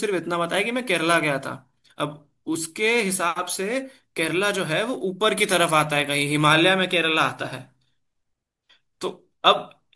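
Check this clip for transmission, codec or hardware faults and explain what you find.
No transmission, codec or hardware faults.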